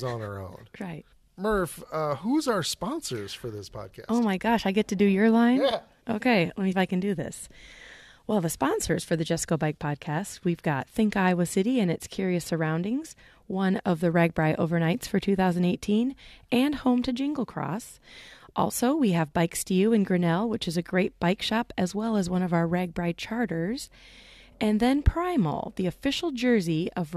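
At 1.12 s, 6.71 to 6.73 s and 22.32 to 22.34 s, the speech has damaged data in a compressed stream. The decoder hits corrupt bytes and loses frame sync. Each is a brief chirp or blip, the second between "let me" and "I can do this", the third between "shop as well as" and "of our".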